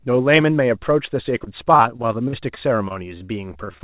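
Repeated packet loss (robotic sound) runs from 1.38 s to 3.82 s in this speech clip: sixteen short dropouts, none longer than 46 ms, are patched by stretching the preceding audio, so about 13% of that stretch is filler and the sound turns choppy. The band stops at 4 kHz, which fits a narrowband G.711 call path.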